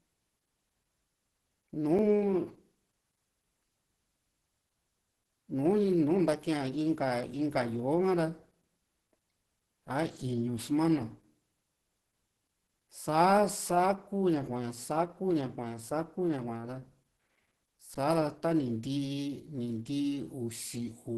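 Opus compression, likely the cause of the heavy coding damage heard across the whole recording, puts the speech through a low-rate encoder, around 12 kbps, running in its hybrid speech mode. Nothing survives above about 12.2 kHz, and the voice comes out muffled and hoarse, with rough, grainy texture where fine detail should be. The encoder spends its few bits on keeping band energies rather than exact waveform detail.

Underrun with held sample occurs at 1.98 s and again at 17.94 s. Each time the output buffer ran dry and the converter froze on its last value, so the waveform goes flat for 5.8 ms and then 11.6 ms, which fits buffers of 256 and 512 samples. The sound stops abruptly rather than fading. Because a few milliseconds of live audio, then roughly ten, were lost meanwhile, playback does not pick up where it stopped.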